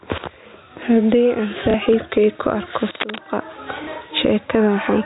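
Throughout the speech the level swings roughly 20 dB: gain pumping, likely from a fast limiter pulling down an overdriven input. At 1.71 to 1.74 s a small blip is packet loss with the last packet repeated: about 30 ms of audio went missing, which points to a single dropped packet, and the receiver replayed the previous packet in its place. Just after "ku arko", from 2.95 to 3.21 s, dense uneven scratching sits a little above the speech level. This is cable scratch noise, likely from a worn connector or lead being moved. At 3.84 to 3.87 s the same repeated-packet blip returns over another 30 ms gap, heard through the narrow telephone band of the G.711 line.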